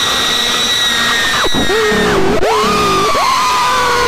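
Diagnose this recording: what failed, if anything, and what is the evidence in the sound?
A second, slower capture path or an out-of-step edit has most likely mixed the same signal into the recording twice. The result is a doubled audio track running through the whole clip: every event returns about 0.7 s later as a full-band copy roughly 5 dB quieter than the original. The repeat carries no decay tail or room colour, which rules out an acoustic echo or reverb and points to a routing or editing fault.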